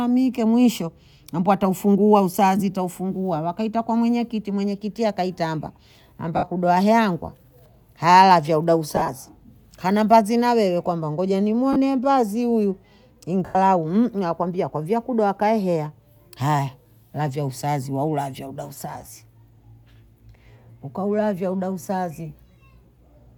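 At 6.37 s, 8.96 s, 11.73 s and 13.45 s you get lost LE Audio frames: about 60 ms, 60 ms scattered over 120 ms, 30 ms, then 100 ms. The decoder repeats the last spectrum with scrambled phase, so the speech smears into a noisy blur, and the longest gap starts fading toward silence.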